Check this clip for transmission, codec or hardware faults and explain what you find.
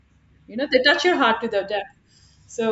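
Nothing to report: no transmission, codec or hardware faults are audible anywhere in the speech.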